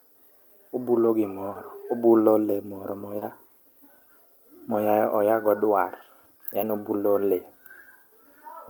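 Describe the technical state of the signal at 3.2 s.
A brief smear or wobble in the speech runs from 3.19 to 3.23 s: short concealed packet loss, where about 20 ms never arrived and the receiver extended the preceding sound to cover it.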